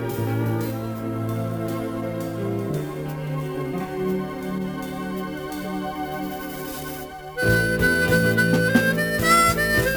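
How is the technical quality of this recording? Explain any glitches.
Technical quality is compromised by crude rate conversion audible for the whole clip. Samples appear to have been repeated rather than filtered, consistent with a 32 kHz to 44.1 kHz change, leaving inharmonic error roughly 20 dB below the signal: a gritty fizz trailing loud and high-frequency sound.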